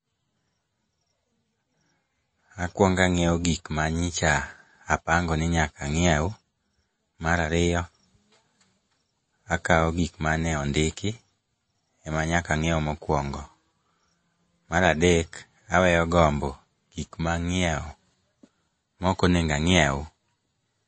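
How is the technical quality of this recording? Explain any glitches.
The technical quality is noticeably compromised by codec damage. MP3 compression is plainly audible throughout the speech: nothing remains above about 8.3 kHz, and sibilants sound watery and swirly, which points to a low bitrate, likely around 32 kbps. The encoder zeroes weak frequency lines that flicker between frames, so the treble loss comes with chirpy, metallic artefacts rather than the clean, steady dullness of a simple low-pass filter.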